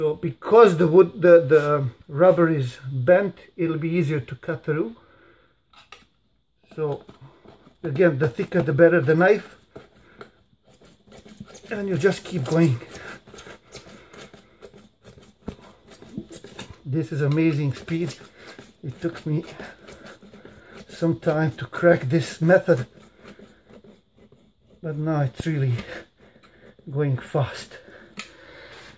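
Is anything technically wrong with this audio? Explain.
No, nothing in this audio points to a technical fault, and the signal holds steady throughout without any break, distortion or level disturbance.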